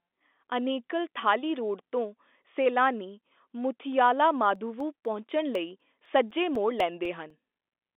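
From 4.56 s to 7.80 s the speech picks up a steady ticking, a small click every 0.25 s, around fifteen in all, heard only where there is signal, over the narrow telephone band of the G.711 line. These are periodic USB or driver dropouts: at each tick something stalls the USB link or audio driver and roughly a millisecond of audio is lost, replaced by silence, and that sudden gap in the waveform is what clicks.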